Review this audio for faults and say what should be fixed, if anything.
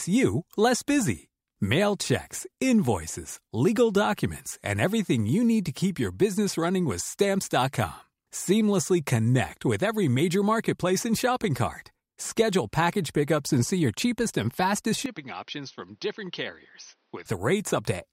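From 15.06 s to 17.26 s the speech turns dull and boxy. Nothing is heard above 6.2 kHz. The level drops by roughly 10 dB, and faint new background noise sits well below the speech. There is no gap at the switch. The likely cause is an input switched to a poorer device, such as a second microphone or a headset's call profile, with a narrower band and its own gain. Lock the recording input to one device for the whole session.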